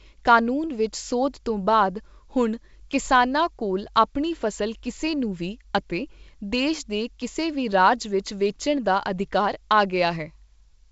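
Listening to this speech clip, carried over G.722 wideband telephone coding at 64 kbit/s with nothing above about 7.7 kHz, nothing stood out.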